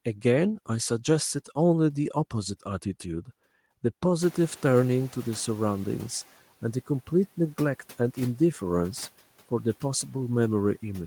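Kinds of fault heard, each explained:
Noise suppressor catching up: noise rising near 4 s passes through less reduced, then sinks about 8 dB over 2.13 s steadily, unlike gate pumping.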